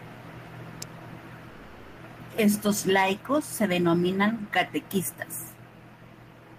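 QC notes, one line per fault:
0.82 s, electrical switching spike: a sharp snap sits on top of the speech for about a millisecond, with nothing lost underneath it. This is most likely a nearby switch, motor or static discharge arcing briefly and being picked up by the audio line.
1.49 to 2.00 s, call audio freeze: the speech stops and is replaced by about 490 ms of sustained, fading continuation of the last sound, never dropping to silence. Playback then resumes exactly where it left off, so nothing is missing, but everything afterwards runs about 490 ms later. The likely cause is delayed packets draining the jitter buffer.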